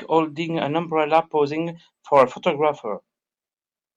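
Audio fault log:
No audible faults detected.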